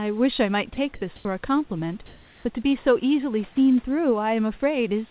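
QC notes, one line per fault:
0.74–0.77 s, sound dropped by the voice detector: The sender's voice detector likely judged a brief, quiet stretch of speech to be background and stopped transmitting, so the receiver substituted comfort noise. About 30 ms of real sound is lost, heard as a tiny gap filled by flat hiss before the speech resumes once the detector triggers again. The call is band-limited to 4 kHz, consistent with G.711 telephone coding.
1.16–1.25 s and 2.06–2.45 s, comfort noise in place of the background: During these pauses the sender likely switched to discontinuous transmission, sending only occasional background updates while the receiver generated synthetic noise shaped to approximate the room. The real room noise, about 30 dB below the loud passages, is replaced by a smooth, featureless hiss for 90 ms and then 390 ms. Its level differs from the true background by about 5 dB in the first pause and about 2 dB in the second, so the floor shifts and then snaps back when speech returns.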